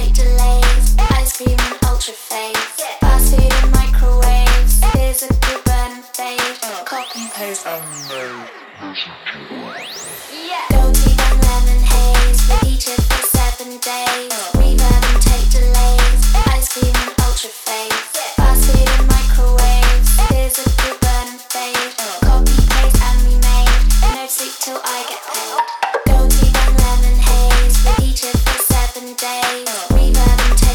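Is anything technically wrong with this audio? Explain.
No, nothing in this audio stood out as technically wrong on listening.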